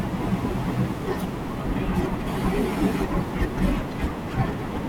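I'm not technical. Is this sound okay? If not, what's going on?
Yes, nothing is wrong with this recording.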